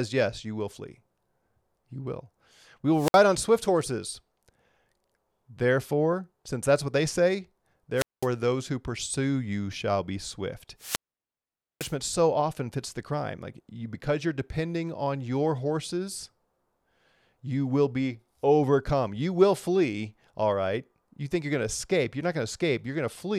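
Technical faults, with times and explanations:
2.93–3.23 s, 7.96–8.27 s and 10.78–11.96 s, wireless microphone squelch dropout: The radio link fades. Hiss rises, then the receiver's squelch mutes the output. The holes last about 61 ms, 206 ms and 850 ms before the speech returns.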